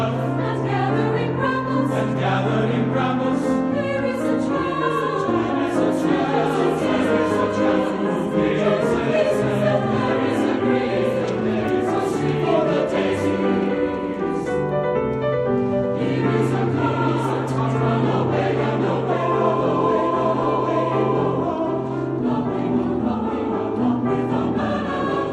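No technical faults are audible.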